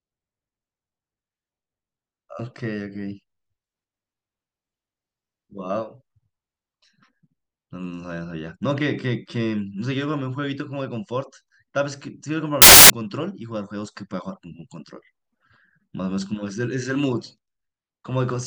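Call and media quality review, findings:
Samples built from the wrong bytes, 12.62 to 12.90 s: 0.28 s burst of loud, harsh broadband noise replacing speech. Probable component: decoder or sample reader, off by a byte or wrong byte order. Low-order bits land in the high byte, so rapid bit-level variation becomes loud hiss.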